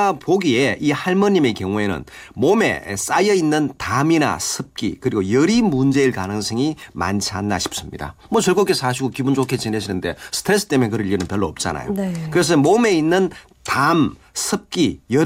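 No audible technical faults present.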